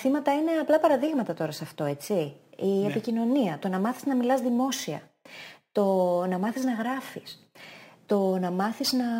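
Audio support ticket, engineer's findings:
Imaging from sample-and-hold upsampling, whole clip. Bright metallic fizz riding on the speech, rising and falling with its level. Image band roughly 11.03 to 22.05 kHz, about -24 dB relative to the signal. Fits a 22 kHz source raised to 48 kHz by sample repetition. Probable component: resampler with no interpolation filter. Spectrum mirrored around the old rate and left unremoved.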